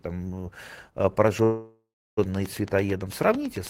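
From 1.28 s to the end, a train of clicks runs at about 9 per second with regular spacing. The pulses share one shape and peak roughly 5 dB above the speech, ticking through pauses too. The likely cause is electrical interference or a faulty connection or power supply.

At 1.43 s a call audio freeze stops the speech for about 0.74 s. The last sound carries on as a fading buzz or hiss, ending in roughly 0.33 s of silence. Speech resumes at 2.19 s where it stopped, so nothing is lost, only delayed.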